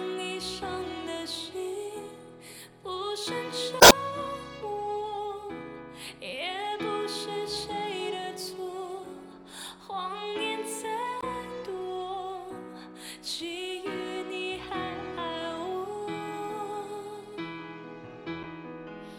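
Short chirps and squawks break through the sound at 3.78 to 3.92 s, again at 11.20 to 11.24 s, and at 18.41 to 18.45 s, with the first being the longest and adding about 26 ms to the timeline. This is damaged data in a compressed stream: corrupted bytes made the decoder misread frames, lose sync and hunt for the next valid frame header, emitting garbled output until it locked on again.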